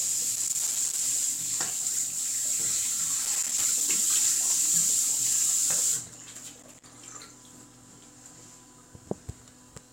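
Three bursts of loose connector crackle interrupt the sound, from 0.35 to 1.06 s, 3.25 to 3.88 s and 6.50 to 6.85 s. A worn or dirty contact is making and breaking as it shifts, chopping the signal into irregular scratchy crackle.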